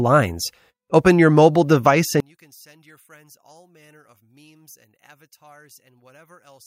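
One channel inverted is the likely cause of the collapse from 2.20 s, just after "your mobile device", to the end. With one stereo channel's polarity reversed, the mono sum cancels the centred speech. The level drops by about 34 dB, leaving only a faint residue of the channel difference.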